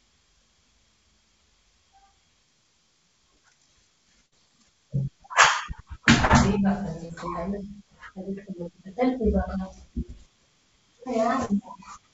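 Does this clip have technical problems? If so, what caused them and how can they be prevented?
Yes. A burst of packet loss hits at 4.26 to 4.34 s. Several packets in a row arrived too late or not at all. The receiver stretched the last sound for about 56 ms, fading it into a buzz or hiss. About 60 ms of the real audio is gone. A larger adaptive jitter buffer and forward error correction on the sender help prevent this.

Short concealed packet loss occurs at 6.26 to 6.31 s, 7.05 to 7.11 s, and 11.45 to 11.51 s. Each time, about 40 ms of audio never reached the decoder. The receiver filled the hole by continuing the previous sound, then blended back. Each one sounds like a brief smear or wobble. A more stable network path and in-band redundancy help prevent these.

The call path itself has nothing above 8 kHz. That fits a wideband codec such as G.722 at 64 kbps.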